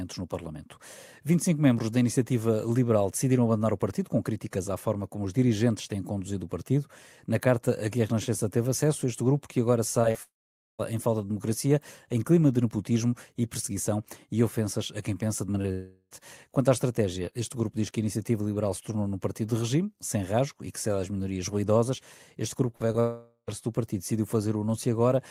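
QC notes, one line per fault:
10.11–10.17 s, short concealed packet loss: About 40 ms of audio failed to reach the decoder, and the receiver patched the gap by extending the preceding sound before crossfading back. It is heard as a brief smear in the speech. On a spectrogram, the harmonics or noise band run flat and unchanging across the patch, with a soft seam where the real signal returns.
10.23–10.81 s, long network dropout: About 0.56 s of audio is missing, likely because of a network outage. The concealment carries the last sound briefly as a fading buzz, and roughly 0.47 s of silence follows before speech resumes at "em falta de democracia". The waveform shows a short decaying tail, then a flat line. The spectrogram shows the tail as a thin fading band followed by an empty block.
15.47–15.66 s, repeated packet loss (robotic sound): Right after "ofensas a quem pensa", three separate gaps occur, the longest about 20 ms. 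Together they patch roughly a quarter of this stretch. Each hole is filled by extending the last sound, so the speech turns choppy. On a spectrogram, short frozen segments alternate with real speech, marked by faint vertical seams at each join.
15.72–16.14 s, long network dropout: About 0.4 s of audio never arrived, likely because of a network interruption. Concealment fills almost all of the gap with a droning extension that decays, leaving only about 30 ms of near-silence before real audio returns. The spectrogram shows a stretched, gradually fading harmonic band and no new onsets.
22.76–22.82 s and 22.92–22.96 s, short concealed packet loss: Two brief holes occur here, about 40 ms and then about 20 ms. Each is bridged by continuing the prior sound, which gives a quick smear or wobble. In the spectrogram, each patch appears as a narrow frozen slice with a blurred edge at the crossfade.
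23.00–23.50 s, long network dropout: About 0.48 s of audio is lost, likely to a network outage. A fading buzz covers most of the gap, with only about 50 ms of silence before speech resumes at "do partido decidiu". The waveform shows a decaying envelope, a brief flat line, and then an abrupt restart.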